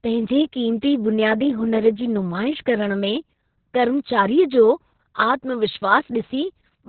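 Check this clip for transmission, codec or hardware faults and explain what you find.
One codec fault runs through the whole clip: Opus voice compression, heavily applied. The SILK linear-prediction coder is working in narrowband mode, so nothing is heard above about 4.3 kHz, and the excitation is coded very coarsely. The damage fits a bitrate of about 6 kbps with long frames. The speech sounds muffled and boxy, with a hoarse, slightly robotic buzz in place of natural breathiness, and consonants like s and f lose their edge.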